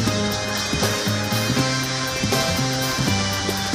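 Throughout, the audio was read two samples at a time, so it plays at double speed, an octave high.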